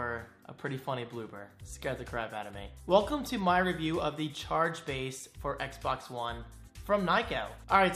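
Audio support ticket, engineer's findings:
No faults found on listening; nothing to report for this ticket.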